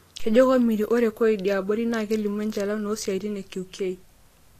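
Throughout, the speech sounds hissy and grainy with nothing above 14.2 kHz, likely Vorbis compression near 37 kbps quantising treble detail into noise.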